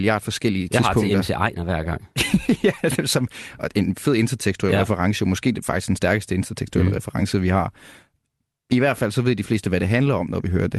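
Clock drift between sender and receiver runs through the whole clip. The sending clock runs roughly four percent fast. Audio arrives quicker than it is played out. The jitter buffer keeps filling, and the receiver must shed material to keep its delay in check.

Repeated timing corrections follow from that, from 0.21 s to 10.78 s. The speech plays at about 104 percent of its natural pace. Short pieces are cut at uneven intervals, always in the same direction. Each cut is small. It comes across as a faint hiccup or a slightly rushed, unsteady rhythm. The Opus coding noise and a top end stopping near 12 kHz fit the call path itself.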